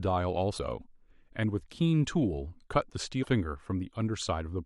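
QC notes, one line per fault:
0.54–0.59 s and 3.20–3.26 s, damaged data in a compressed stream: each spot is a brief glitch of about 50 ms that breaks into the speech. Part of the compressed stream there is corrupt, so the decoder misreads those frames, loses sync, and has to search for the next valid frame header before normal decoding resumes.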